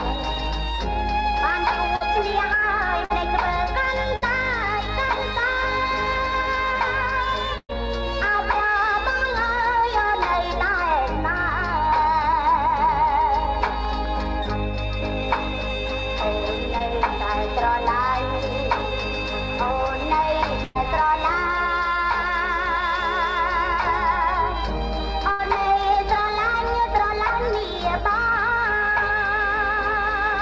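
Between 1.96 and 4.24 s the sound picks up a few brief ticks and small smears, about three in all, the longest around 50 ms. These are scattered short gaps: about 160 ms of audio arrived too late or not at all, one piece here and another there. The receiver papered over each hole by extending whatever sound came just before it. Roughly 7 percent of that stretch is patched material, so it stays mostly clear.

At 7.58 to 7.75 s the last sound is held and fades, then drops out briefly before resuming. This is a burst of packet loss. About 120 ms went missing in a row. The receiver stretched the preceding sound over about 110 ms while turning it down, and left roughly 50 ms of silence before the audio picked up again. The same kind of burst returns at 20.64 to 20.88 s, where about 120 ms is lost and bridged without any silent gap. It returns again at 25.32 to 25.41 s, with about 80 ms lost. 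In each case the material in between is simply gone.

From 16.79 to 16.82 s there is a quick smear, almost a tick. It is short concealed packet loss: about 20 ms failed to reach the decoder in time. The receiver filled it by continuing the last sound, then blended back into the real audio.

The call path itself removes everything above 8 kHz, which fits a wideband codec such as G.722.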